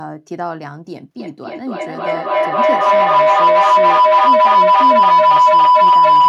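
Speech, with a feedback howl from 1.2 s to the end. Two devices in the same room share the call. Sound loops from speaker to microphone, gaining each pass. It narrows to a tone around 1 kHz, pulses about every third of a second, and peaks about 16 dB above the speech.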